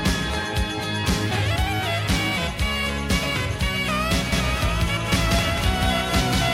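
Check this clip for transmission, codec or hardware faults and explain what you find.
A doubled audio track begins at 4.32 s and continues to the end of the clip. From that point a second, full-band copy of the same audio runs about a fifth of a second behind the first, at roughly equal loudness. It most likely comes from the signal being captured again through a slower path, or from an edit that leaves two copies out of step. The copy cuts in abruptly, with no decay or room colour, so every sound is followed by a dry, slapback-like repeat.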